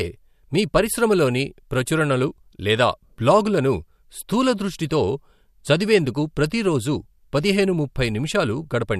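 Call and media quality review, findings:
No faults found in this speech clip. Nothing for this ticket to follow up.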